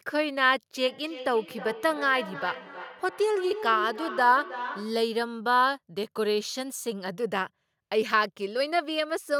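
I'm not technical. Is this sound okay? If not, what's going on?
No. From 0.85 to 5.11 s each word comes back roughly a third of a second later, thinner and more ringing. That is feedback echo between two devices: two gadgets in the same room on one call, each microphone picking up the other's speaker.

At 7.38 s the speech jumps ahead by a tiny sliver, with no gap. This is likely a dropped buffer (overrun): the recording software fell briefly behind, so a few milliseconds of sound were overwritten and lost.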